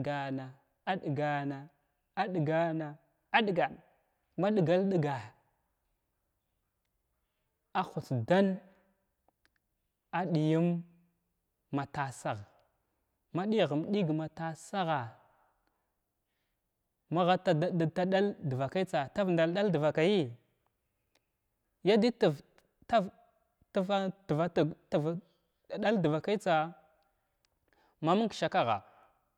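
No technical faults are audible anywhere in the recording.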